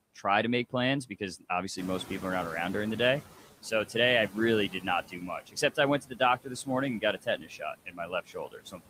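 Noise suppressor artifacts run through the whole clip. The suppressor treats the steady background as noise and pulls those bands down by about 15 dB, frame by frame. Because it only acts where the noise stands alone, the background sinks in the gaps between words and comes back up underneath the speech. The result is a background noise that pumps in step with the talking rather than sitting at one level.

Noise suppressor catching up follows the words "to make plans because," from 1.77 to 3.38 s. Around 2.0 s the room noise steps up by about 12 dB. That noise belongs to the room itself and settles about 16 dB below the speech. The suppressor's noise estimate trails behind the jump, so the louder background first comes through with little reduction. Over roughly 1.6 s it is gradually pressed down, reaching a cut of about 12 dB.

Speech cut by the noise suppressor appears at 4.69 to 4.85 s (about 10 dB), 5.08 to 5.78 s (about 16 dB), 6.0 to 6.2 s (about 15 dB), 6.44 to 6.68 s (about 15 dB), and from 7.0 s to the end (about 17 dB). 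In each stretch the suppressor mistakes parts of the speech for background and turns them down along with it. The affected portions sound swallowed or faint; in the first four stretches this adds up to about a tenth of a second to a few tenths each.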